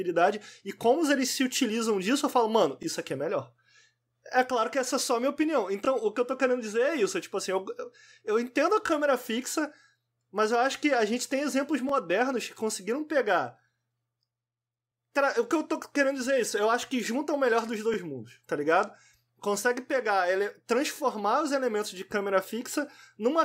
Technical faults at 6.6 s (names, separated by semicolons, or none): none